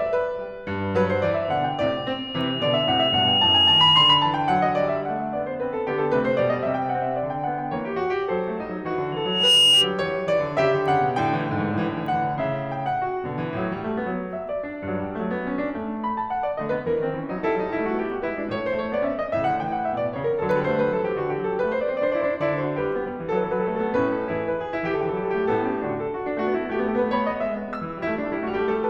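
Loudspeaker feedback squeal rises over the music from 1.44 to 4.46 s, swelling for about two seconds, and again from 9.12 to 9.95 s, building much faster. A microphone is re-amplifying its own loudspeaker, so a 2.9 kHz tone grows to about 10 dB above the music. The gradual swell, rather than a constant tone, sets it apart from steady interference whine.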